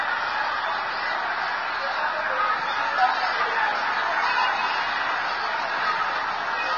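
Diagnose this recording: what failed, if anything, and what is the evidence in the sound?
Vorbis compression throughout, codec stage: nothing above 6.5 kHz, and treble quantised so coarsely it turns to grainy hiss, likely from a bitrate near 20 kbps.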